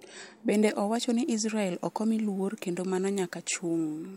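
No technical faults occur anywhere in the speech, so there is nothing to place in time order.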